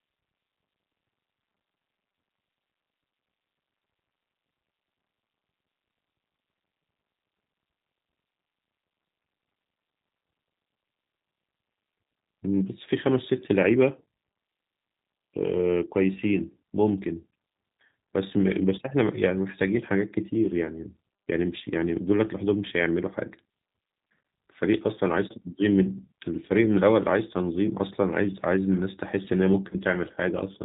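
G.729 codec coding runs through the whole of this speech recording, and the damage is plainly audible. The codec rebuilds the voice from a vocal tract filter, a pitch predictor and a handful of pulses per short frame, so the speech comes out intelligible but rough and slightly synthetic. Nothing above 4 kHz survives, leaving a narrow, telephone-like band, and the coarseness points to a low-rate coder of around 8 kbit/s. VoIP packet loss concealed by the speech codec appears at 29.69 to 29.75 s. About 20 ms of audio goes missing, which fits a single lost packet. The decoder bridges the gap by extending its last pitch and filter shape while lowering the gain, so the sound smears into a brief buzzy tone or coloured noise that fades. Because each frame is predicted from the one before, the voice stays weak or distorted for a short while after the gap, out to about 29.75 s, rather than snapping straight back.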